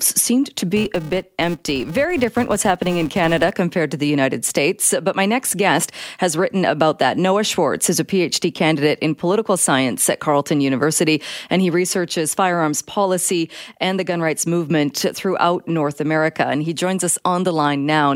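From 0.77 to 3.54 s, a filter restarted on every block adds a 345 Hz buzz that tracks the speech level. That rate fits 128-sample blocks, each starting from silence.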